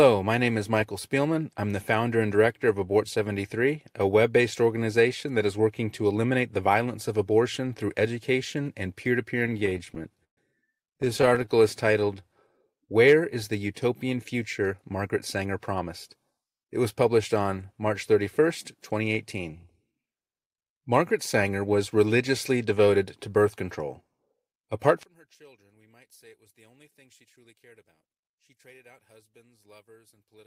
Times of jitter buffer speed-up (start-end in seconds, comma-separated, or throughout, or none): 14.73-16.24, 27.24-28.26